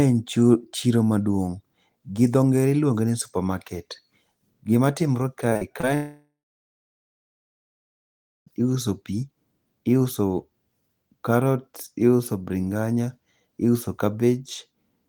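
From 5.49 to 5.85 s, repeated packet loss (robotic sound) breaks the speech into choppy fragments, with four short gaps of up to 37 ms patched by extending the preceding audio. From 5.95 to 8.48 s, the sound turns into a brief fading buzz or hiss, then about 2.1 s of silence, and resumes with roughly 2.5 s missing, likely a long network dropout.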